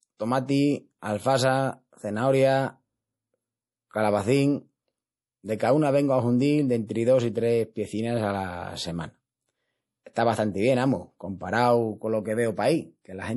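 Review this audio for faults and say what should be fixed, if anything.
MP3 compression is the likely cause of the damage heard throughout: nothing sounds above 11.5 kHz, and weak frequency lines drop in and out between frames, giving a watery, swirly texture and metallic chirps on s sounds, which fits a low bitrate around 48 kbps. To prevent it, keep a lossless master and encode at a considerably higher bitrate.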